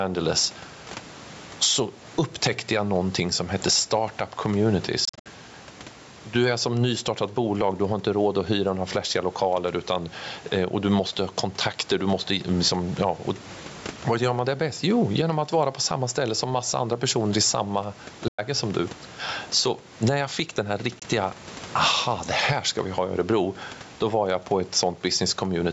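Right from the start there's gain pumping running through the whole clip. The level rides up and down by around 10 dB. It sounds squashed, with loud and soft parts pulled close together. That likely comes from mic gain set far too high, with a fast limiter clamping each peak. The room noise sits about 32 dB under the speech.

The Bluetooth dropouts are likely packets not reaching the headphones in time. The first, at 5.05 to 5.26 s, is a chattery cluster of short holes, roughly 140 ms lost over about 200 ms, the longest gap 61 ms. The second, 18.28 to 18.39 s, loses about 100 ms between "andra personer i samma" and "som du". The third is a tiny 20 ms blip at 20.99 s just after "jag fick den här". Each time the speech picks up further along, as if it had kept playing.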